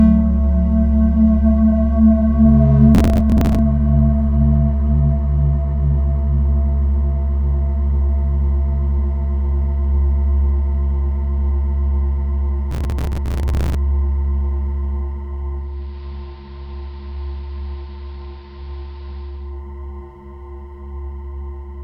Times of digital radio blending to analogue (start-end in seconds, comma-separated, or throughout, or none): 15.54-19.64